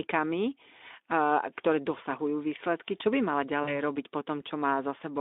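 At 3.63 s the speech drops into VoIP packet loss concealed by the speech codec, lasting until 3.79 s, just before "robiť po". About 40 ms of audio went missing, which fits two lost 20 ms frames, and the decoder filled the gap by repeating its last pitch and filter with falling gain, so a brief, smeared buzzy tone or coloured noise fades out. Recovery lags past the gap itself. On a spectrogram, the harmonics run flat and unchanging, then dim. The waveform shows repeated, shrinking pitch cycles. Above and below the gap, the Speex telephone band, roughly 250 Hz to 3.6 kHz, remains visible.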